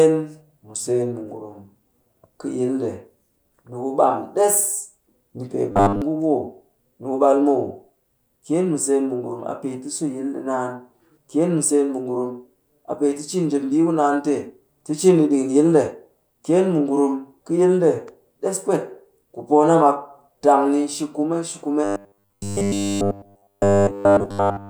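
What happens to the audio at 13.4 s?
Nothing goes wrong at 13.4 s: the speech runs through that moment intact, with no dropout, click, distortion or other technical fault.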